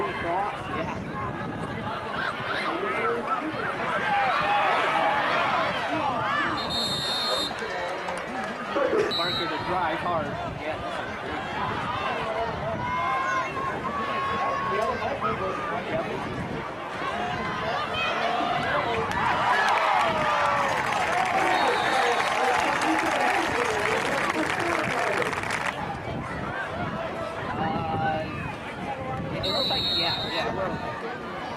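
No technical faults occur in the clip, so there is nothing to describe in time order.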